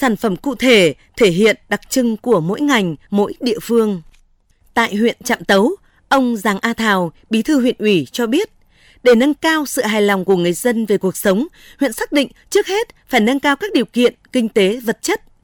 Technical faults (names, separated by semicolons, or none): none